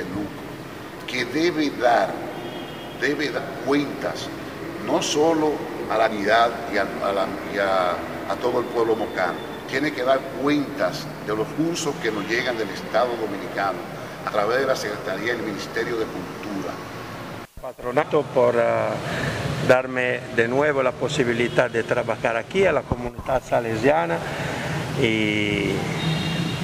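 Compressed frames are skipped at 3.36, 6.10, 9.37, 11.51, 14.28 and 18.01 s. Whole frames never play, so the audio jumps ahead by roughly 0.1 to 0.3 s. The longest jump is at 6.10 s. Overlapping frames blur each join into a soft blip, not a click.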